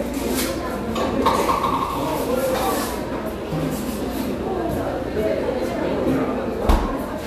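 A brief fault hits the sound from 1.86 to 1.90 s: a corrupt frame concealed, where the AAC decoder caught damaged data and quietly covered roughly two frames.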